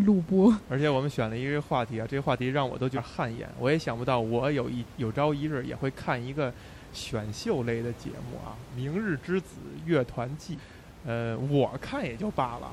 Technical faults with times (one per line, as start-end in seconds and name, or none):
2.93-2.99 damaged data in a compressed stream
5.44-5.50 damaged data in a compressed stream
10.55-10.60 damaged data in a compressed stream